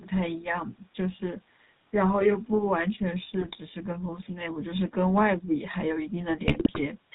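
The whole recording has passed through the GSM full-rate codec, which rebuilds the vocal tract as a filter and excites it with sparse, regularly spaced pulses, discarding most of the excitation detail. Nothing above 4 kHz survives, so the speech sounds dull and band-limited, and the coarse pulse excitation gives it a plainly audible buzzy, gravelly roughness throughout, which fits the 13 kbps full-rate coder.

Twice, GSM bit errors corrupt the data reaching the decoder. From 3.41 to 3.56 s, flipped bits in the filter, pitch and gain values distort the spectrum and make the level jump, producing a brief squawk and gargle. From 6.46 to 6.79 s a longer burst does the same over roughly twice as many frames, breaking the sound into pops and gargling warbles. Both bursts point to an error rate of around 2 percent on a weak link.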